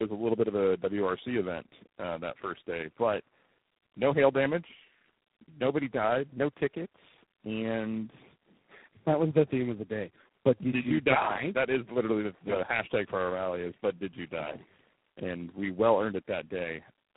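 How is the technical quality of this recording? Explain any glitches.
The quality is poor throughout, with one fault running the full length.

Tandem speech coding, throughout: the speech sounds as if it passed through four low-rate speech codecs in a row, consistent with a chain like G.726, AMR-NB, G.729A and G.726 again, joined by G.711 links. Each coder re-encoded the previous one's already degraded output, so errors compounded. The result is rough, muffled and warbly, with nothing above about 3.9 kHz.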